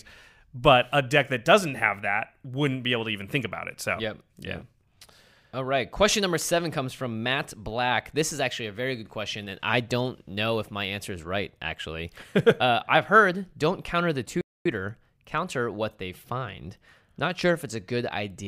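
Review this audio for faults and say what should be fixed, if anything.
A playback stall interrupts the speech at 14.41 s and lasts until 14.66 s. The output drops to silence for about 0.24 s in mid-flow, then resumes. The gap is long enough to hear as a hitch rather than a natural pause. The likely cause is the player running out of buffered data, or its audio thread being blocked, so nothing reached the output until it recovered. To prevent it, give playback a larger buffer and keep its thread free of blocking work.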